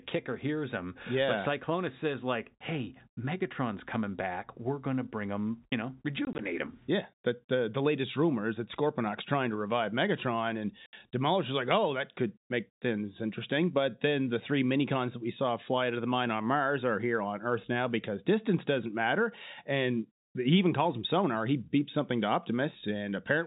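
Between 6.25 and 6.39 s, then 10.86 to 10.93 s, the speech drops into silent holes: packet loss filled with silence, with gaps pointing to 10 ms packets, under G.711 telephone band-limiting.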